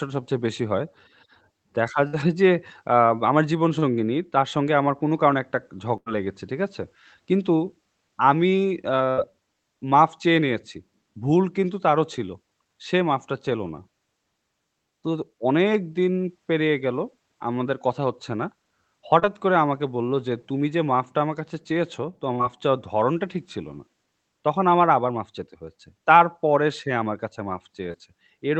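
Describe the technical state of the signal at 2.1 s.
A burst of packet loss runs from 2.07 to 2.15 s. Several consecutive packets of this speech never arrived in time, so the receiver stretched the last decoded sound to cover about 56 ms, fading it as the gap continued. The result is a brief smeared, decaying hold in place of new sound. When the stream picks up again, roughly 60 ms of the speech has been skipped, heard through the call codec's usual band limit at 8 kHz.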